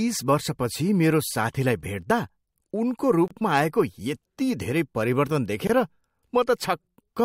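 At 3.28 s the speech drops into silence for about 27 ms, until 3.31 s. At 5.67 s it happens again for about 22 ms, ending at 5.70 s. Both are gaps at a join of encoded pieces. Each section was encoded on its own and butted together untrimmed. The encoder's start-up delay and final-frame padding stayed in. You hear a brief hole with edges smeared by the codec. The speech then resumes exactly where it broke off.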